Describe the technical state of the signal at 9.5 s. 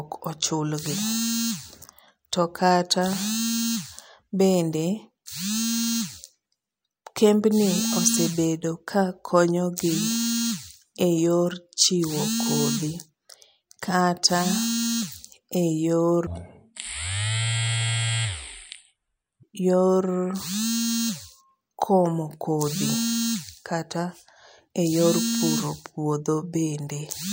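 At 9.5 s the speech signal is intact, with no fault audible at that moment.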